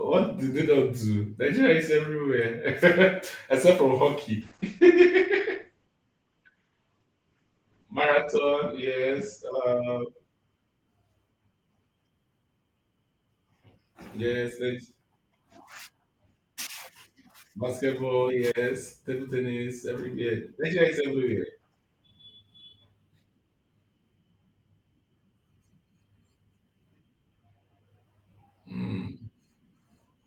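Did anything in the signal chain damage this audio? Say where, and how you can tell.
Yes. A call bitrate drop at the codec stage damages the speech from 4.42 to 12.15 s. The bitrate falls from 32 to 11 kbps, so the encoder codes coarsely. Bandwidth shrinks from 20 kHz to 8 kHz, muffling the sound. The roughest stretch lasts about 3.9 s.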